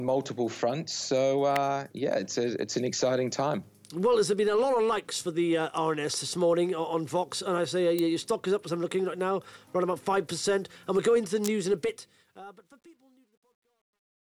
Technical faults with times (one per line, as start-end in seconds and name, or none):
1.56 electrical switching spike
7.99 electrical switching spike
11.44-11.47 electrical switching spike
11.75-14.31 truncation distortion on a fade